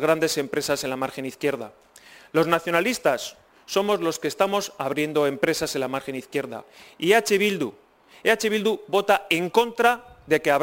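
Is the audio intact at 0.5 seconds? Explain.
No. Sample clock jitter runs through the whole clip: timing errors of roughly ten microseconds add a hiss, around 20 dB down, that rises with loud, bright passages.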